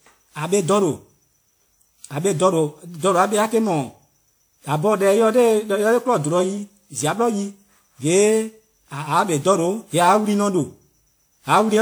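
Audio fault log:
throughout: generation loss. The speech has a swirling, hollow smear, with consonant attacks blurred and a watery shimmer on sustained sounds, yet the spectrum still reaches 20.1 kHz. That combination sets it apart from a single low-bitrate encode, where the top end would be cut well below that. The cause is likely about seven repeated passes through a lossy codec, each requantising on a shifted frame grid. The character fits WMA 1 at 96 kbit/s.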